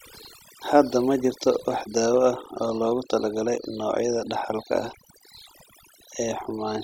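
Overdone noise removal runs through the whole speech clip. A noise reduction stage was set far too aggressively on a noisy recording. Any frequency band that sits close to the noise estimate gets pushed down hard or shut off, and the quieter parts of the voice are caught along with the noise. Between phrases the background drops to near silence, broken by twinkling, chirpy specks.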